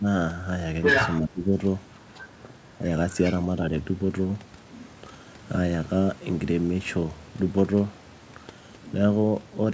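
In this speech recording, the echo canceller appears to have lost track of which sound was the local talker and which was loudspeaker echo, likely while both sides spoke at once, and it turned everything down. That is speech suppressed in double talk. A brief, shallow dip of about 5 dB sits at 0.00 to 0.05 s. A much deeper one, about 20 dB, runs from 1.21 to 1.56 s, where roughly 300 ms of the voice is pushed down. The same canceller also failed to remove all of the far end from the microphone, and that is the other side's voice leaking through, likely as uncancelled loudspeaker echo. From 0.83 to 1.2 s that second voice stands about 5 dB above the talker. At 2.14 to 2.25 s it comes through only faintly, about 20 dB down, and from 3.11 to 3.39 s it is about 15 dB down. The whole clip stops at 8 kHz, which fits a G.722 call path at 64 kbps.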